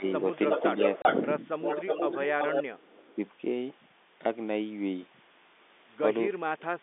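The speech is dipped by about 15 dB from 0.00 to 0.05 s. This is speech suppressed in double talk, likely from the echo canceller ducking both talkers at once.

From 0.33 to 1.27 s, an echo leak adds a copy of the speech 358 ms late, at roughly the same level. The speech was likely played on a loudspeaker, picked up by the microphone and not cancelled.

Inside that stretch, 0.62 to 0.79 s dips slightly, by about 5 dB. It is the same double-talk suppression.

At 1.02 s, a 30 ms hole of silence with hard edges cuts the speech. This is packet loss filled with silence, and it fits a single lost packet.

A second echo leak runs from 1.63 to 3.14 s. It has the same 358 ms delay, about 5 dB under the speech.

From 2.92 to 3.19 s, the speech drops by about 25 dB. It is suppressed in double talk.

From 6.33 s to the end, the speech sinks by about 30 dB under the same suppression.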